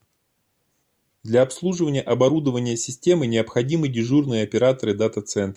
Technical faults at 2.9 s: none

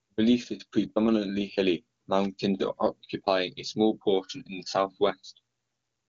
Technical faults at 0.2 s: none

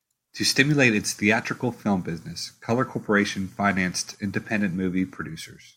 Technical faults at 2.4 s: none

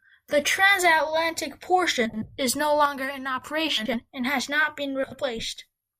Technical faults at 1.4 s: none

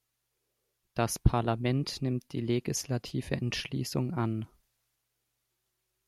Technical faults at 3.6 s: none

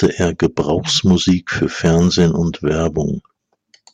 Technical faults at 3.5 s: hard clipping

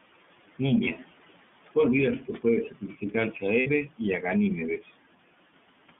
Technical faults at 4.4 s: iLBC codec

